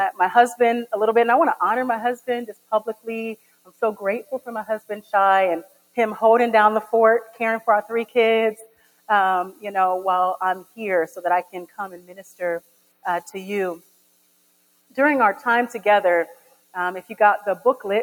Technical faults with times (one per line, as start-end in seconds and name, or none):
0.00-18.03 noise suppressor applied to music or sounds
2.17-3.82 sound cut by the noise suppressor
4.80-5.13 sound cut by the noise suppressor
5.63-5.97 sound cut by the noise suppressor
8.55-9.09 sound cut by the noise suppressor
10.63-13.05 sound cut by the noise suppressor
13.79-14.97 sound cut by the noise suppressor
16.34-17.14 sound cut by the noise suppressor